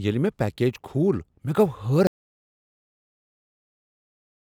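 At 2.07 s the speech cuts off into an audio dropout to silence, likely a lost input: dead silence to the end, no room tone.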